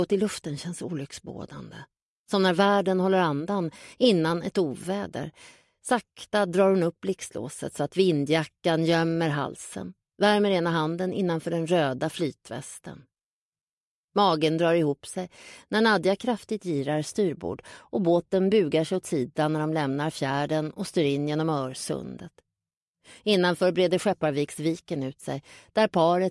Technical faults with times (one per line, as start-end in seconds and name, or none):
none